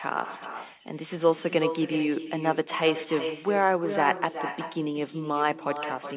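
Throughout the speech runs an echo with no canceller: each phrase returns roughly 0.4 s later as a copy about 10 dB quieter and thinner. The far end's loudspeaker leaks into its microphone, and nothing subtracts it before it travels back. Everything sits below 4 kHz, as expected on a narrowband G.711 call path.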